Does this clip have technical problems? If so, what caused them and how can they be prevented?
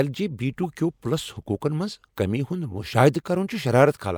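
Yes. A corrupt frame decoded at 0.63 to 0.65 s in this speech clip produces a brief glitch that peaks around -20 dBFS. The damage spans a couple of compressed frames whose bits were flipped in storage or transmission. The decoder played them anyway, misreading gains and spectral codes, so energy landed at the wrong frequencies for those frames' duration. Prevention: add error detection such as checksums or CRCs so damaged frames are concealed instead of decoded.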